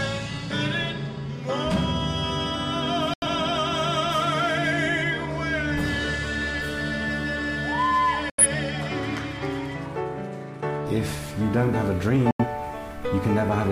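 At 3.14 s, 8.30 s and 12.31 s the audio drops out in a digital broadcast dropout, each lasting about 0.14 s before sound resumes (3.14 to 3.27 s, 8.30 to 8.44 s, 12.31 to 12.45 s). The receiver muted when frames failed or went missing, then picked up at the next good frame. Each gap swallows about 85 ms of programme, which fits two lost frames, so the sound cuts to silence and that stretch of programme is lost.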